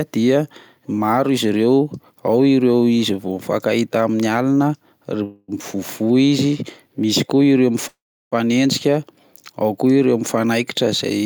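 Speech with two call audio freezes, likely from packets held up so the jitter buffer ran dry. At 5.23 to 5.51 s the last sound stretches into a fading buzz, and at 7.88 to 8.35 s a brief buzz drops to silence. Speech then resumes intact, only later.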